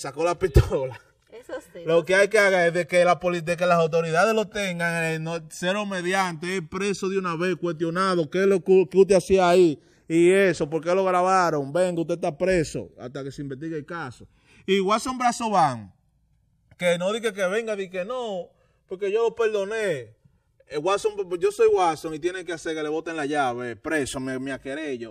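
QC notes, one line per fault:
Throughout, channels drifting apart: the two channels run on clocks that disagree by roughly 200 ppm, so their offset creeps to about 3 ms. In mono, comb notches glide steadily one way, unlike a flanger's back-and-forth sweep or a fixed comb's static colouring.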